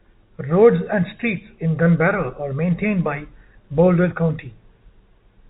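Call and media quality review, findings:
No faults found: speech on a G.711 mu-law telephone path, band-limited at 4 kHz with at most faint quantisation noise riding on the signal level, as expected for that coding.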